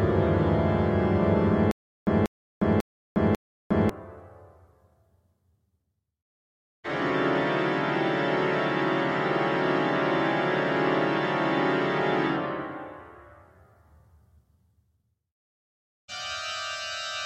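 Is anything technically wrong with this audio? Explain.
Yes. From 1.71 s to 3.89 s there is a stutter with silent gaps. The same 189 ms burst of sound plays four times, and each repeat is followed by 357 ms of digital silence, giving an even 545 ms cycle. The likely cause is a stalled player or stream that replayed its last fragment on each retry and then ran dry, so the audio for that span is lost. On a waveform this appears as identical blocks separated by flat, near-silent lines. A spectrogram shows matching slices with blank columns between them.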